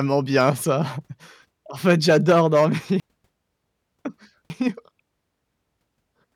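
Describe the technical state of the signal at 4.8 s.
At 4.8 s the signal sits inside a chunks out of order fault spanning 3.0 to 5.0 s, just after "fait j'adore dormir": one 0.5 s chunk plays three chunks late, so the speech jumbles at hard joins. Unlike a dropout, nothing is missing, only misplaced.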